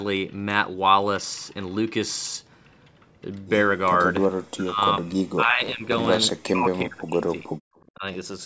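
A truncating block size mismatch begins at 4.22 s and runs to the end. Each block's tail is discarded, producing a 100 Hz buzz and speech running 1.09 times fast at near-normal pitch. Speech suppressed in double talk overlaps it at 4.44 to 4.81 s, 4.98 to 5.16 s, 5.33 to 5.85 s, 6.42 to 7.47 s and 7.94 to 8.04 s. The speech dips by roughly 15 to 40 dB, likely because an echo canceller muted the talker while the far side spoke.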